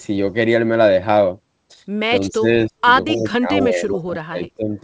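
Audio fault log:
2.30 to 4.74 s, speech suppressed in double talk: the voice dips by about 15 dB at 2.30–2.48, 2.68–2.86 and 3.68–4.74 s, and by about 30 dB at 3.11–3.50 s. Likely an echo canceller ducking both talkers at once.
3.11 to 3.24 s, echo leak: a faint copy of the voice returns 256 ms late, far below the speech. This is likely residual loudspeaker echo the canceller missed.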